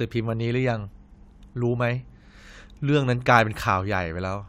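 No technical faults are audible.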